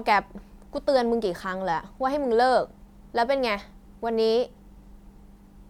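No technical faults can be heard anywhere in the speech. There is no moment in the recording that needs to be singled out.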